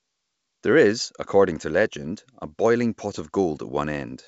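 Speech over wideband telephone coding, with no faults heard.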